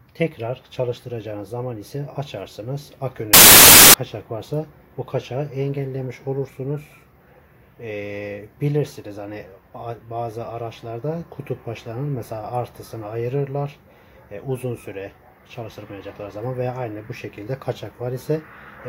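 From 3.34 to 3.94 s, samples are built from the wrong bytes. Misassembled bytes push fast-changing low bits into the loudest part of each value, producing loud, harsh broadband noise.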